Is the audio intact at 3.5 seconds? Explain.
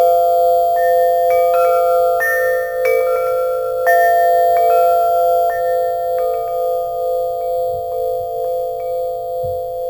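No. Imaging from sample-and-hold upsampling runs through the whole clip. Samples repeated from 16 kHz to 44.1 kHz mirror content into 8–16 kHz at about -23 dB, a metallic fizz.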